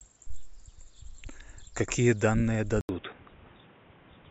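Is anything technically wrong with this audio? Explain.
Yes. At 2.81 s, an 80 ms gap in the waveform marks a likely input switched to a poorer device. From then on, the spectrogram is empty above 3.8 kHz, so the speech sounds dull over new, faint background noise.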